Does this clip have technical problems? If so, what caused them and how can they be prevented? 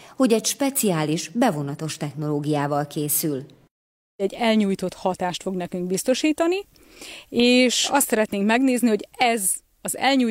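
No, the clip has no technical problems. There is nothing here that needs fixing or preventing.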